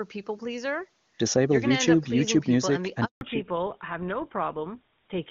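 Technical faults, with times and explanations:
3.05–3.21 s, handover gap: the sound fades out within a few tens of milliseconds and stays silent for 160 ms while the call switches networks and no frames arrive. Unlike a packet-loss dropout, nothing is patched in, and the codec changes right after.
3.21 s to end, fallback to narrowband: after the gap everything above 4 kHz is gone, where the clear wideband coding before it reached higher. The speech turns duller and coarser, which fits a drop from HD Voice to an older codec such as GSM full rate. A simple low-pass filter would dull the sound without adding this roughness.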